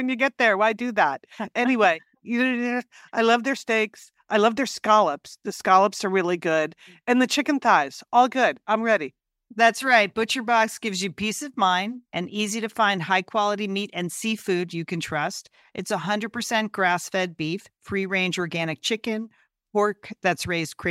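No technical faults are audible.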